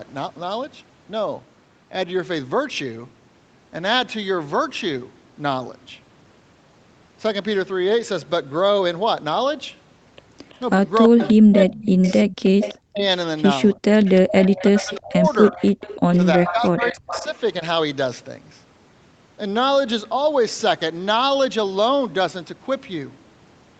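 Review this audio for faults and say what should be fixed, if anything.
Echo leak appears from 10.49 to 11.33 s, 12.03 to 13.04 s and 14.05 to 17.37 s. A copy of the far talker's speech returns about 330 ms late at about -15 dB. That is likely an echo canceller passing residual loudspeaker pickup. On a spectrogram, faint duplicate harmonic patterns trail the originals by a third of a second. Better canceller convergence or a headset would prevent it.

Speech suppressed in double talk occurs from 10.73 to 12.04 s, 12.90 to 13.02 s, 13.74 to 14.05 s, 14.67 to 15.61 s and 16.35 to 17.35 s. The loudspeaker-side voice drops by roughly 40 dB in the first three spans, roughly 20 dB in the fourth and roughly 15 dB in the last. The likely cause is the echo canceller muting its own talker along with the echo. The waveform shows hollowed-out gaps in the envelope. A double-talk-robust canceller tuned for less aggressive suppression would prevent this.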